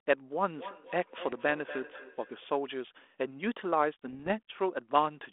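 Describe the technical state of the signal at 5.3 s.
At 5.3 s the speech is intact, with no fault present, only the narrow telephone band of about 300 Hz to 3.5 kHz and the light, level-following graininess of G.726 ADPCM coding at 32 kbit/s.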